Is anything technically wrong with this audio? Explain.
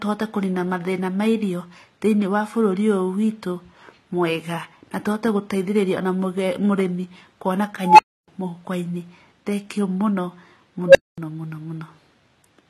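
Yes, two things. The whole clip carries layered codec damage from transcoding between lossy codecs. The smeary, swirly texture of a very low-rate codec sits under a second layer of coding artefacts, and nothing comes through above 21 kHz. That mix is most likely the result of a low-bitrate HE-AAC encode, something around 20 kbit/s, being re-encoded to AAC-LC at roughly 48 kbit/s. The second encoder spends its bits faithfully preserving the first one's mistakes, then adds its own on top, so the speech ends up carrying both sets at once.

There are also two unstable filter blowups. The first runs from 7.80 to 8.28 s. A tone around 1 kHz swells over about 190 ms until it's squealing and clipping, and then the audio drops out for about 290 ms. The second, at 10.87 to 11.18 s, is a lower tone, around 500 Hz, that builds faster, in about 77 ms, followed by roughly 230 ms of silence. In both cases a recursive filter with bad coefficients fed its own output back until the values ran away and overflowed, and the sound stayed dead until the filter reset.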